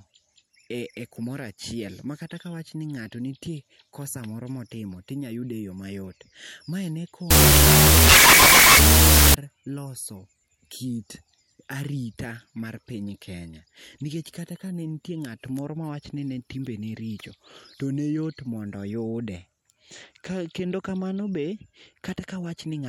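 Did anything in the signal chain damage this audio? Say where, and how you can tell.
Yes, at the sample-format conversion stage: a wrong sample width from 7.31 to 9.34 s, just before "loso kit arita mar". Data written as 16-bit integers were read as unsigned 8-bit, so loud hissing noise buries the speech, which plays at half speed, an octave low.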